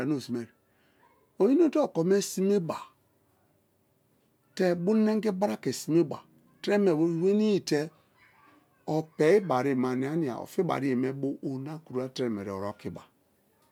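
A speech recording, and no technical fault can be heard anywhere in it. Nothing points to a problem in how the audio was captured, processed or delivered.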